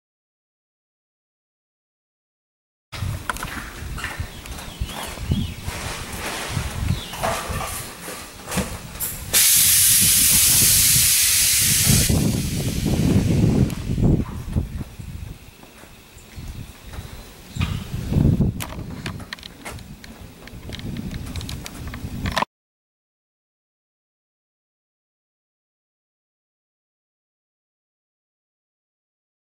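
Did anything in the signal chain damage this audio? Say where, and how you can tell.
No, nothing in the chain can be heard to have harmed this audio at any stage from capture to playback.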